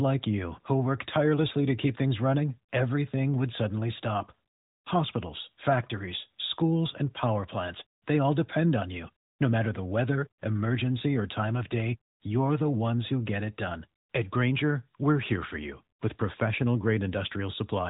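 No technical faults heard.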